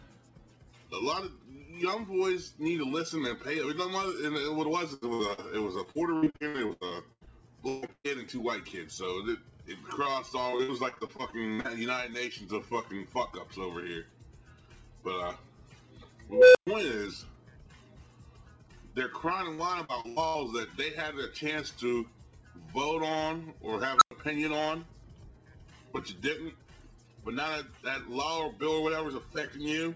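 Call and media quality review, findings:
Repeated packet loss (robotic sound) at 4.94–8.06 s, 10.50–11.66 s and 19.54–20.37 s. The jitter buffer stretches the last audio over each hole, giving choppy, robotic sound. There are 19, 11 and 5 gaps, the longest 141 ms.

Unstable filter at 16.32–16.67 s and 23.97–24.11 s. A recursive filter diverges, so a tone near 500 Hz, then near 1.5 kHz, swells over 230 ms and 39 ms. Dropouts of 119 ms and 99 ms follow.

The WebRTC call path shows a cutoff at 8 kHz, which fits G.722 at 64 kbps.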